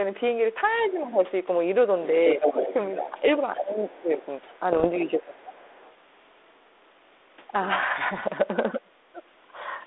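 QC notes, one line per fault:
0.74–1.04 s, other side's voice leaking through: a faint second voice well below the talker, likely loudspeaker echo the canceller left in the microphone signal.
0.92–1.18 s, speech suppressed in double talk: the talker dips slightly for a brief moment, likely the echo canceller turning everything down while both sides overlapped.
2.33–5.91 s, other side's voice leaking through: a second voice runs nearly as loud as the talker for several seconds, likely uncancelled loudspeaker echo reaching the microphone.
2.38–5.56 s, speech suppressed in double talk: the talker sinks deeply for about a second in total, likely the canceller attenuating both voices during overlap.
4.73–4.87 s and 8.05–8.28 s, bit errors on an ADPCM link: short rough bursts and pops with level jumps. Flipped bits derail the 32 kbit/s G.726 decoder's step size and prediction, so each error rings on briefly.
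8.72–9.22 s, speech suppressed in double talk: the talker nearly vanishes for a little under half a second, likely the echo canceller clamping down hard while both sides spoke.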